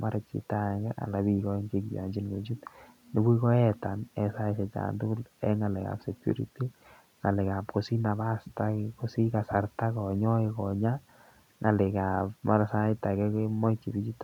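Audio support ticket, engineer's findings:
No faults found in the speech recording. Room noise sits about 44 dB below the speech, part of the recording and not a system fault.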